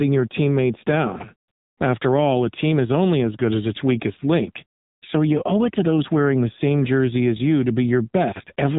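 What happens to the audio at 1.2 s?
Chunks out of order at 1.16 to 1.24 s: a 40 ms chunk of audio arrives one chunk late and plays after the chunk that should follow it. Nothing is lost, but the swapped order creates three hard joins and a brief jumbled moment in the speech.

The AMR narrowband mobile codec also affects this moment, as it does the whole clip. At about 7.4 kbps, its vocal tract model with sparse pulses makes the speech audibly buzzy and synthetic, and nothing above 3.8 kHz passes.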